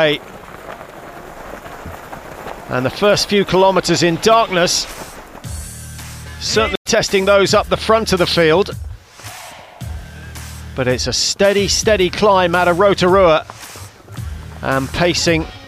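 At 6.75–6.86 s a stream reconnect silences the audio for 82 ms. A fresh decoder then resumes roughly 70 ms further on, skipping material rather than simply pausing.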